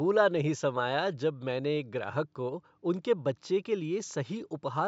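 No technical faults in the speech; the only background is the room's own noise, about 53 dB below the voice, which belongs to the recording space rather than the system.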